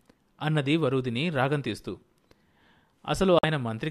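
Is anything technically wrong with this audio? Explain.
Yes. Near the end of the speech, from about 3.39 to 3.44 s, the sound drops to silence for roughly 50 ms and then resumes mid-flow. This is a digital broadcast dropout. The receiver either lost the signal or rejected frames that failed their checksum, so it muted output until valid data returned. The gap of about 48 ms fits two lost frames. Whatever was transmitted during that interval is missing, not merely quieter.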